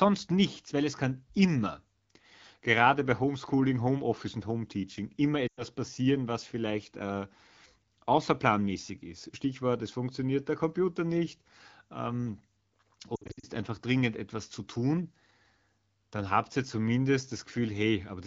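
At 5.48 to 5.63 s, just before "passieren was vielleicht äh", lost AMR speech frames leave about 100 ms concealed. The decoder repeats the last good pitch and vocal tract settings at falling gain, so the sound drops to near silence within two frames. On a spectrogram, the harmonics flatten into frozen horizontal bands and then dim. At 13.16 to 13.46 s, before "einfach dringend etwas zu", about 200 ms of loss is scattered across 280 ms, with runs of up to 60 ms. This gives a choppy warble, and the waveform shows repeated brief amplitude dips.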